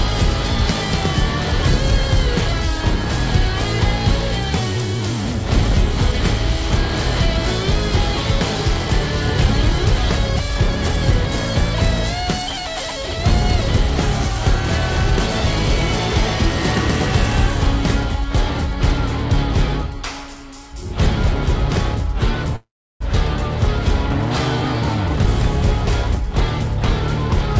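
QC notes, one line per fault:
22.56–23.02 s, call audio freeze: the sound stalls and is drawn out as a short fading tail that drops to silence for about 340 ms, then resumes where it left off. That fits a likely jitter buffer running dry while packets were held up. Unlike a dropout, nothing is lost. About 0.45 s of gap is inserted instead.
25.08–26.43 s, jitter buffer speed-up: the audio runs about 11% fast at unchanged pitch, sounding hurried. The receiver trims short pitch-period slices repeatedly, roughly 150 ms in all, to shed excess buffered delay. Unlike resampling, pitch stays put and only the pace rises.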